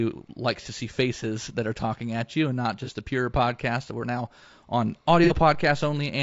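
Speech runs through a constant rough, grainy coding sound, with noise filling the gaps between harmonics and a thin, synthetic-sounding top band. This is likely low-delay AAC compression (AAC-ELD) at a low bitrate, around 32 kbps. Its short frames resolve pitch harmonics poorly, and unlike a burst fault the damage never lets up. Brief AAC frame loss with concealment occurs at 0.62–0.67 s, after "who likes", and at 2.84–2.89 s, after "at you and not". Each is a smeared, noisy patch of about 30 ms, consistent with one lost frame. A longer 60 ms patch at 5.24–5.32 s follows "now on". These are patched over from the previous spectrum rather than dropping to silence or clicking like a plain dropout.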